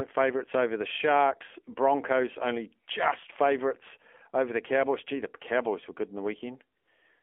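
The whole clip is AMR narrowband mobile codec speech. The line passes only about 300 Hz to 3.4 kHz, so the voice sounds thin and boxed. The codec damage is plainly audible. The voice is buzzy and synthetic, which fits a low AMR mode near 7.4 kbps.

From 6.78 to 6.88 s, AMR comfort noise takes over. The phone judged the talker silent and sent no speech frames for 100 ms. The receiver filled that gap with smooth synthetic noise, which switches in and then out.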